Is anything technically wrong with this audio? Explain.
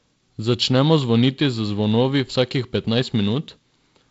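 No, the speech carries the normal signature of G.722 wideband telephone coding at 48 kbit/s, with its content ending at 7.7 kHz, and nothing in the signal points to a technical problem.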